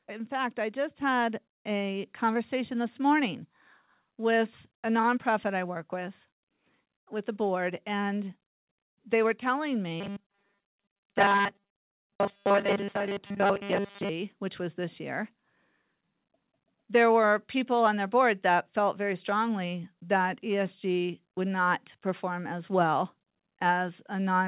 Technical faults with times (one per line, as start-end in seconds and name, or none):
1.02 microphone volume stepped up
2.04 microphone volume stepped up
10.00-14.09 robotic sound from repeated short buffers